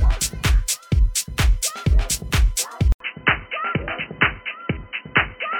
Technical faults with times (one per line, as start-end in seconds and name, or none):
2.92-5.59 input switched to a poorer device